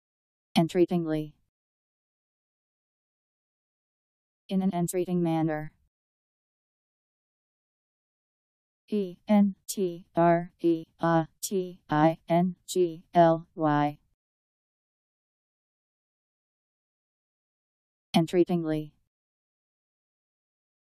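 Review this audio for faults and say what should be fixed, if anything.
No faults; nothing to fix.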